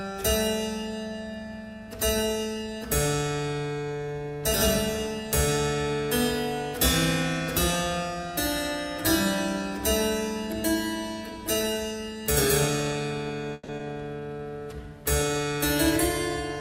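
At 13.53 s packets were likely held up in transit and the jitter buffer ran dry, producing a call audio freeze that lasts until 13.70 s. With nothing new to play, the receiver fills the gap by extending the last sound for about 150 ms, heard as a brief buzzy continuation that fades rather than dropping to silence. When the delayed packets arrive, playback resumes exactly where it stopped, so nothing is lost. Instead, 150 ms of extra delay has been inserted into the stream.

Just afterwards, between 13.78 and 13.81 s, comes a skip ahead. With later audio already queued behind the stall, a stretch is dropped, roughly 70 ms of material, and the delay is pulled back by around 50 ms. Only about 10 ms of fill bridges the cut, so the sound on either side is spliced almost directly together and playback seems to jump forward abruptly.

From 14.20 to 14.39 s there is a jitter buffer slow-down. The buffer is running low or has just raised its target delay, so the receiver rebuilds its reserve by repeating single pitch periods many times in a row. 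This adds 55 ms and slows playback to 77% of normal speed while the pitch stays unchanged. The result is a short, drawn-out stretch with an elongated quality.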